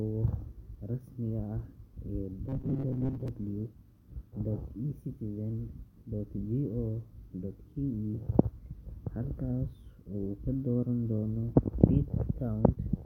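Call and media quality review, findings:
Robotic sound from repeated short buffers, 2.49–3.28 s: audio likely arriving too seldom at the jitter buffer or playout stage, so the last 7.5 ms or so is looped to fill gaps and about half the real audio is skipped. Speech becomes a rigid metallic buzz fixed near 133 Hz.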